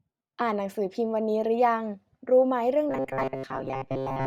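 A speech clip that turns into robotic sound from repeated short buffers from 2.90 s to the end at 4.26 s: the voice becomes a rigid metallic buzz at 133 Hz. This is likely from audio arriving too seldom, so a roughly 7.5 ms chunk is looped over most of that stretch.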